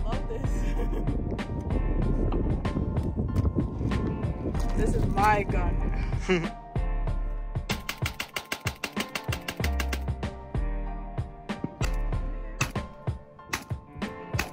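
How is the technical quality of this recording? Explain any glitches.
Nothing here to worry about: I'm not hearing any glitches at all, and the whole recording holds together steadily with nothing jumping out.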